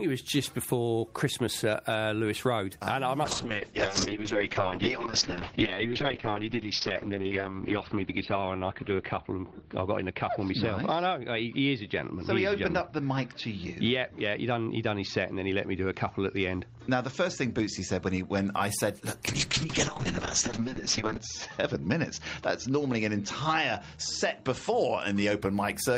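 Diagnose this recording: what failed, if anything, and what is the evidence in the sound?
The network's bandwidth estimate fell twice, forcing a call bitrate drop in the encoder, from 3.24 to 18.59 s and again from 19.28 to 25.47 s. Both stretches turn rough and watery, and the top end disappears, cut off at 6 kHz the first time and 8 kHz the second. The coarsest coding lasts about 4 s, then 1.9 s, which fits a fall from roughly 32 kbps to 6 kbps.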